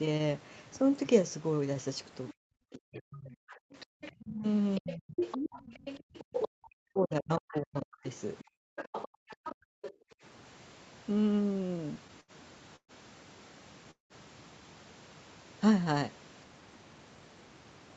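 A speech recording that has passed through a call, with both sides talking at once in its first half. The echo canceller most likely could not tell the local talker apart from the loudspeaker echo during this overlap, so it turned both down. This produces speech suppressed in double talk from 2.35 to 5.2 s and again from 6.46 to 8.06 s. The voice dips, thins and breaks up in pieces across roughly a second and a half in each stretch, at worst falling by around 40 dB. The same canceller likely also failed to remove all of the loudspeaker signal from the microphone, so the other side's voice leaks through from 2.98 to 6.47 s, only some 5 dB under the talker, and from 7.4 to 9.93 s, around 10 dB under. While the loudspeaker was active, the canceller also clamped the microphone hard, and the background is gated by the echo canceller at 3.7 to 3.93 s, 6.0 to 6.14 s, and 8.44 to 10.23 s. The room sound drops out by about 40 dB each time, briefly in the first two and for about a second in total in the last, then returns when the canceller releases. 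Later, packets kept arriving late and the jitter buffer ran dry six times between 11.53 and 12.31 s. These repeated stalls (stutter) stretched the last sound to fill 134 ms, about a sixth of that span, with the longest gap 73 ms, so the audio drags and stammers while nothing is lost. Two call audio freezes follow, likely from packets held up in transit. At 12.76 s the sound hangs as a fading buzz or hiss for about 0.12 s, 80 ms of it silent, and at 13.91 s it does the same for about 0.19 s, with 130 ms of silence. Each time the speech resumes where it stopped, now delayed. The Opus codec path caps the audio at 8 kHz, as set by the codec's bandwidth.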